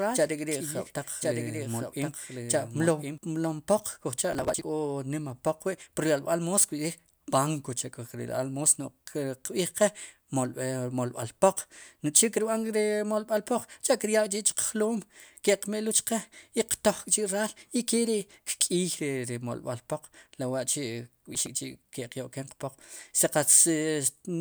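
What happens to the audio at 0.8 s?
At 0.8 s the speech is heard twice: a doubled audio track, already running when the clip opens and ending abruptly at 3.18 s. A second full-band copy trails the original by roughly a second, about 5 dB quieter, most likely because the same signal was captured again through a slower path. Unlike an echo or reverberation, the copy carries no decay or room colouring; it is a clean duplicate that simply cuts off rather than fading.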